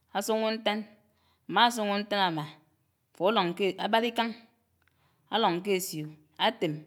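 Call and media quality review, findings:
No audible defects found in the speech recording; nothing to log against any component.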